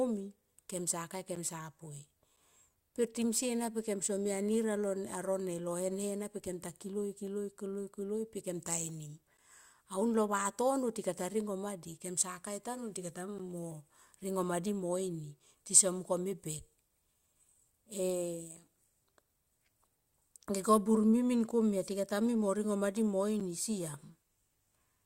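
Gaps between stream segments at 1.35, 2.36, 9.37, 13.38 and 23.40 s insert 7 to 12 ms of silence at one-second segment joins, heard as brief hard-edged dropouts and seen as hard-edged blank vertical stripes.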